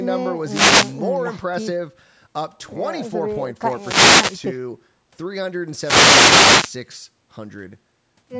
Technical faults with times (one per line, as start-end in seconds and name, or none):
0.41-1.01 wireless microphone noise hit
3.68-4.51 wireless microphone noise hit
5.76-6.78 wireless microphone noise hit